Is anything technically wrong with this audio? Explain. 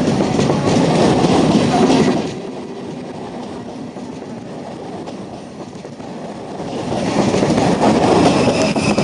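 Yes. From 2.04 to 2.42 s there is zipper noise: the level falls by roughly 15 dB, but in abrupt 4 dB jumps at around ten per second instead of one continuous ramp. Each unsmoothed jump makes a tiny click, so a ticking rides on the sound only while the drop is happening. A plain fade has no such clicks, and a dropout would leave a gap rather than stepping down.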